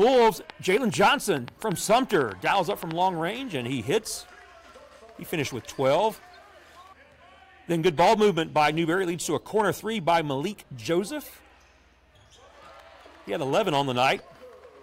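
Right from the start, at 0.02 s, there's a train of clicks that runs until about 2.92 s. It's a burst of roughly twenty similar pops, averaging about 6.6 per second but spaced unevenly, so it comes across as a ragged ticking rather than a steady beat. The clicks poke out well above the sound itself, and they're there in the gaps too. That pattern is likely interference from nearby gear or a faulty connection or power supply.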